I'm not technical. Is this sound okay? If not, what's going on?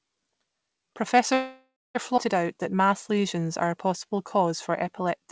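No. Three things go wrong as the call audio travels to you.

Call audio freeze: from 1.34 to 1.97 s, incoming data was likely held up. The last sound smears into a fading buzz, goes silent for about 0.2 s, then resumes with nothing lost.

Skip ahead: at 2.17 to 2.19 s, a stretch of audio was dropped. Roughly 0.4 s of speech vanishes and the two sides join abruptly.

Jitter buffer slow-down: from 2.54 to 5.28 s, the receiver rebuilt its reserve by repeating tiny slivers of sound. Speech plays at 92% speed, dragging slightly without changing pitch.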